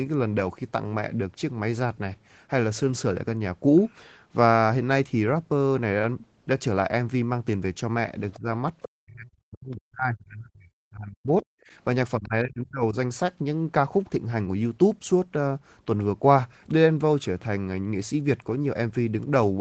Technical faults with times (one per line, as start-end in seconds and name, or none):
8.30-8.39 other side's voice leaking through
8.38-8.47 speech suppressed in double talk
8.82-8.86 other side's voice leaking through
8.85-11.30 speech suppressed in double talk
11.58-11.71 background gated by the echo canceller
12.17-12.96 speech suppressed in double talk
12.23-12.27 other side's voice leaking through